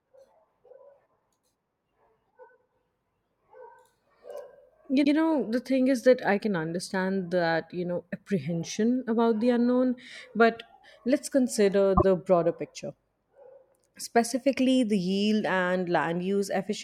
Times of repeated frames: 5.03-5.12, 11.96-12.04

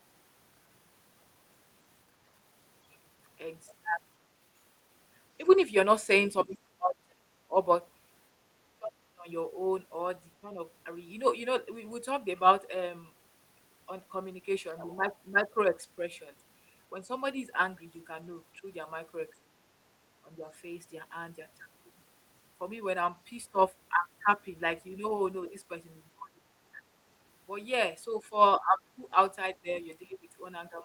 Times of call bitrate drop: none

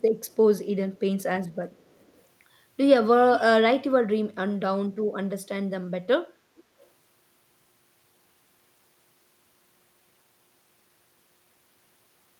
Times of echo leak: 0.27-0.36, 0.95-0.99, 1.52-2.22, 3.33-3.40, 6.57-6.62

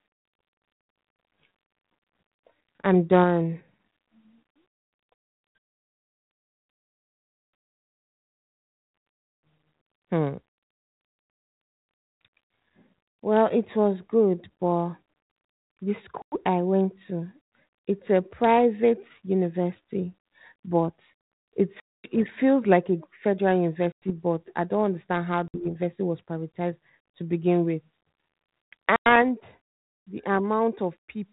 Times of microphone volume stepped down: 29.22

